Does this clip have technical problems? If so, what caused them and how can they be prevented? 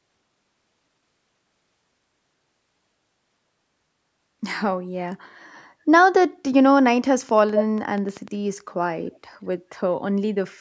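Yes. A train of clicks, likely from electrical interference or a faulty connection or power supply, injects irregular pulses about seven per second from 7.29 to 8.29 s, roughly as loud as the speech. Shielding cables, moving away from noisy equipment and checking connections and the power supply would prevent it.

An echo leak, likely from a far-end loudspeaker whose echo canceller missed part of the signal, returns brief delayed copies: at 7.55 s, about 160 ms late and only about 5 dB below the speech, and faintly at 9.14 s, about 160 ms late. Using headphones on the far end, or a better-tuned echo canceller, would prevent it.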